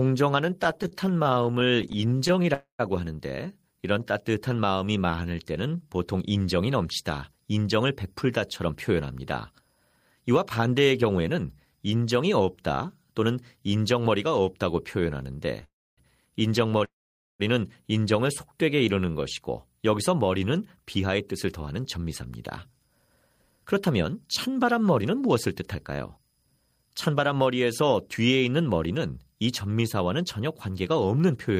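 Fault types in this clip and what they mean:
Repeated stalls (stutter): early on, packets kept arriving late, so the sound catches 32 times in tiny bursts, none longer than 36 ms, dragging without losing anything.
Call audio freeze: three holds where the last sound lingers then fades to silence, up to about half a second, likely packets held up emptying the buffer.
Jitter buffer slow-down: the buffer ran low, so the receiver stretched sound by repeating pitch periods, dropping playback to 89% and later 86% speed.
Jitter buffer speed-up: too much audio had piled up, so short pitch-period chunks got trimmed, and the sound hurries along at 107 to 108% speed.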